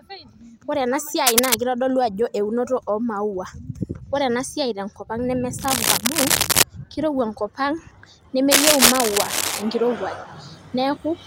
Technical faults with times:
1.27-1.54 cable scratch noise
5.59-6.63 cable scratch noise
8.50-9.62 cable scratch noise

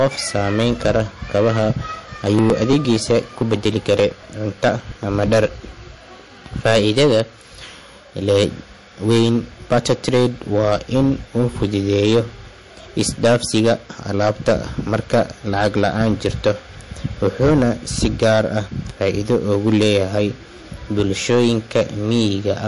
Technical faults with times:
0.00-22.68 hard clipping
0.00-22.68 MP3 compression
2.04-5.26 periodic USB or driver dropouts

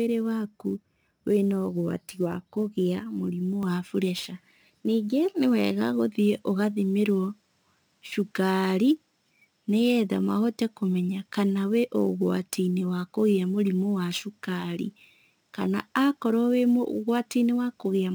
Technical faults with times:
0.00-18.15 sample clock jitter
3.63-18.15 input switched to a poorer device

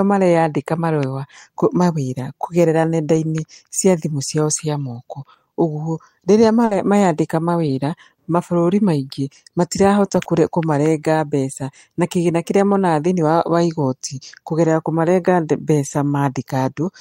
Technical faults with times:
3.15-3.17 lost packet rebuilt from error correction
6.65-10.27 scattered short gaps
14.09 lost packet rebuilt from error correction
15.85-15.95 lost packet rebuilt from error correction

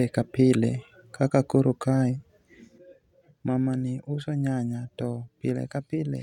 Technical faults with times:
2.78-6.22 one channel drops out

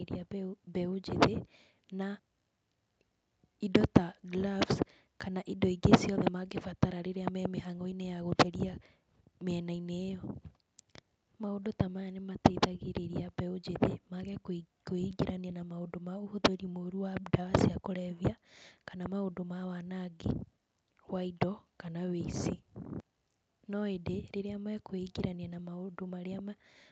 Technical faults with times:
none

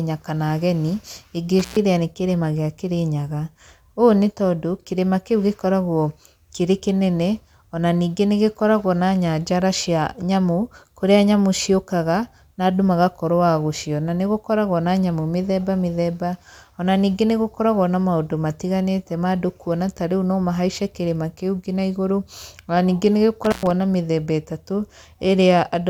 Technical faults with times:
1.59-1.77 intermittent contact
23.44-23.71 intermittent contact

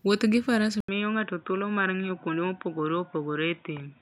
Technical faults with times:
0.80-4.02 input switched to a poorer device

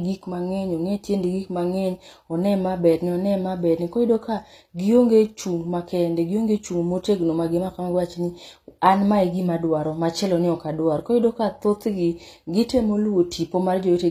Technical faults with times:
0.00-14.11 HE-AAC compression

